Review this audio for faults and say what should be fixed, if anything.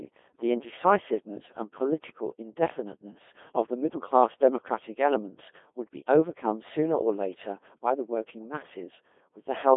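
Robotic, buzzy speech band-limited to roughly 250 Hz to 3.5 kHz throughout: Codec 2 vocoder, resynthesising from pitch and envelope, consistent with about 2.4 kbit/s. Avoid it by recording or transmitting over a full-band waveform codec instead of a low-rate digital-radio vocoder.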